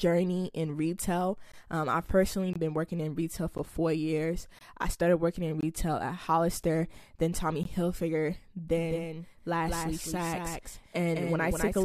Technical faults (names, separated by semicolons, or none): gap between stream segments; doubled audio track